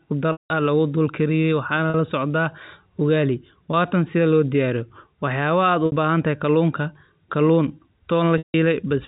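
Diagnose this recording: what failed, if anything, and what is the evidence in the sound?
The speech briefly holds a buzzy, frozen tone at 1.9 s and 5.86 s. Longer gaps at 0.32 to 0.50 s and 8.38 to 8.54 s drone, fade to silence, then cross-fade back into the speech. This is packet loss with pitch repetition at the network stage. Lost packets, which fit a 20 ms packet size, were concealed by repeating the last pitch period. The 180 ms and 160 ms losses outlast the fade-out. The G.711 A-law band limit is audible throughout.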